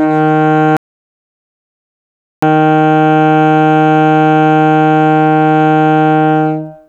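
The music cuts out at 0.77 s and drops to dead silence, no room tone at all, until it comes back in mid-flow at 2.43 s. That's an audio dropout to silence of about 1.66 s, and whatever played in that stretch is simply gone. Likely the input was lost while the recorder kept writing silence.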